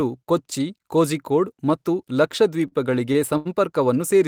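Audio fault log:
2.67–3.47 s: repeated stalls (stutter). Packets arrived late, the jitter buffer kept emptying, and five short gaps were filled by stretching the last sound, so the speech drags and stutters.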